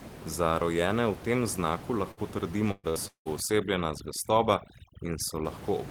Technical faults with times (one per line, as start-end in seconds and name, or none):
2.11-2.20 burst of packet loss
2.71-2.99 burst of packet loss
3.08-3.28 long network dropout
3.40-5.45 overdone noise removal